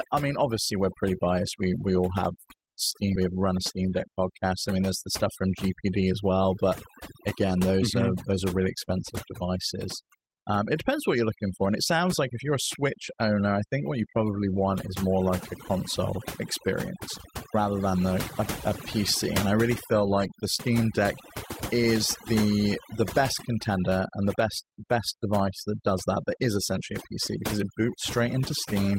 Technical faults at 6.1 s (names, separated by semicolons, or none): overdone noise removal; jitter buffer speed-up